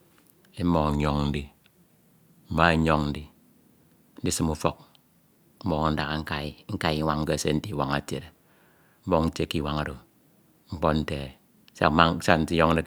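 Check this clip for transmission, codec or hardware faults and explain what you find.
Two faults are audible in this speech clip. A drift correction step at 0.89 to 2.63 s slows the sound by about 6% and lowers pitch roughly a semitone. A second one at 5.94 to 7.13 s, just before "kese nte", speeds it up about 6% and raises pitch roughly a semitone. This is likely clock-matching software abruptly changing playback rate to manage its buffer.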